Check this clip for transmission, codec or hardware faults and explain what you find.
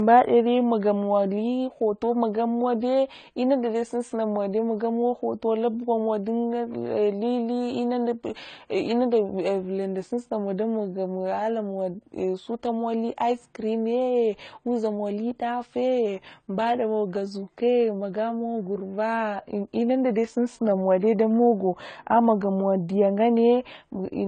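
The speech carries one fault throughout: transcoding between lossy codecs. Nothing sounds above 9 kHz, and swirly, smeared high end sits under a second layer of quantisation grain. This is likely a low-rate HE-AAC encode re-encoded as AAC-LC, the second coder spending bits on the first's artefacts.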